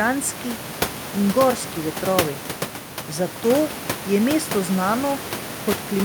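Listening to the speech, nothing stood out as a technical problem, with the room's background noise sitting about 10 dB below the voice as part of the recording itself.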